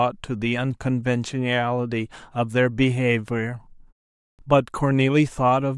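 At 4.35 s, speech resumes after a pause of about half a second, 0.51 s. This is a clipped start after a pause. The first 38 ms of the sound, from 4.35 to 4.39 s, are missing. The output device has gone idle in the silence and is still waking or relocking when the speech returns. The onset is swallowed. The speech starts abruptly, without its opening sound. The pause itself stays quiet, as expected.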